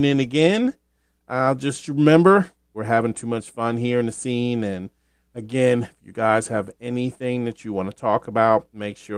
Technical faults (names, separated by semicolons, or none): none